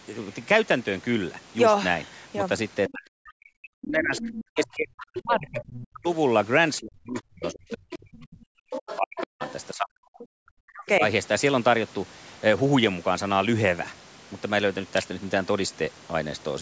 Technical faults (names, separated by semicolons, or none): DC step; other side's voice leaking through; speech suppressed in double talk